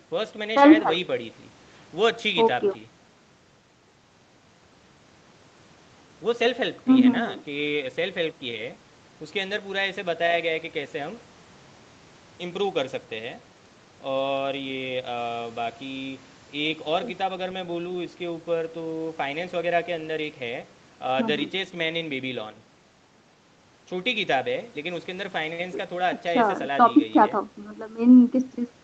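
Nothing here goes wrong at any point; the speech simply carries the ordinary character of a call, with the deepest bass trimmed by the microphone processing and nothing above about 8 kHz, which fits an Opus link running at around 32 kbps.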